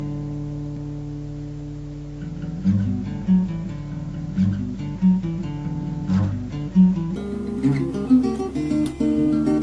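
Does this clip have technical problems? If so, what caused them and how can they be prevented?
Yes. Wrong sample rate from 7.16 s to 9.63 s: the sound runs 1.38 times fast and about 5.5 semitones sharp, which fits 16 kHz audio played at 22 kHz without conversion. To prevent it, pass the true sample rate along with the audio and resample whenever the playback rate differs.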